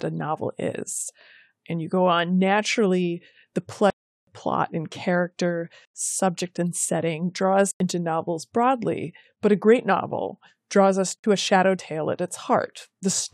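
Blocks of digital silence cut the speech at 3.90–4.27 s (after "go on naturally the"), 5.85–5.94 s, 7.71–7.80 s and 11.19–11.24 s. Output buffers likely went unfilled, with lengths fitting 16384- and 4096-sample blocks, so the sound drops abruptly to silence and back with no fade.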